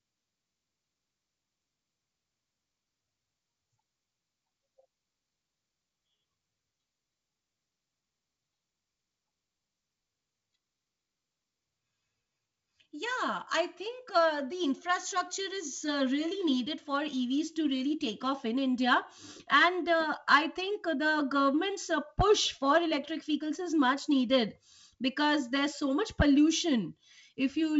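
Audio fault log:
Nothing stood out on listening to this speech clip.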